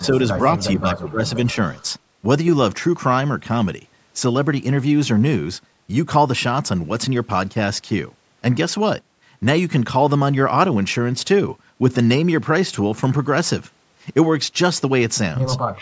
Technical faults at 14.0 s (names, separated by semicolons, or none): none